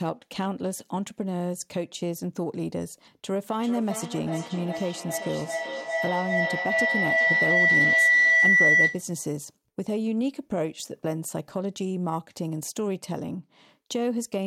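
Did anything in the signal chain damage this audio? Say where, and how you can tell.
Yes. From 3.62 s to 9.11 s the speech is overtaken by feedback howl, an acoustic loop at the call-processing and playback stage, where a second device in the same room feeds the loudspeaker output back into the microphone. Each trip adds gain, so the repeats grow instead of decaying and narrow to a tone around 2 kHz, repeating at roughly 0.4 s intervals. It peaks at about 8 dB above the speech before the loop breaks at 9.11 s.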